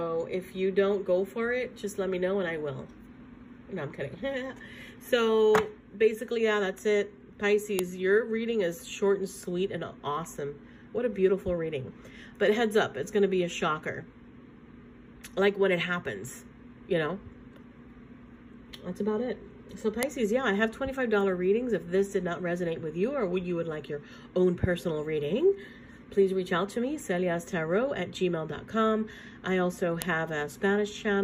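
Sharp clicks at 7.79, 20.03 and 30.02 s are a file header played as audio: pieces were joined with their WAV headers left in, so those bytes snap out as samples.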